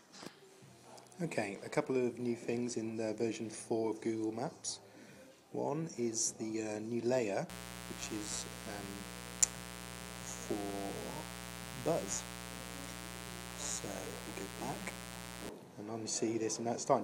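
The audio carries a mains buzz from 7.49 s to 15.49 s, a steady, raspy hum only about 10 dB below the wanted signal. Switching spikes from a dimmer, rectifier or unshielded cable repeat twice per 60 Hz cycle, every 8.3 ms. On a spectrogram this shows as evenly spaced horizontal lines at multiples of 60 Hz reaching several kHz. The waveform shows those regular sharp spikes.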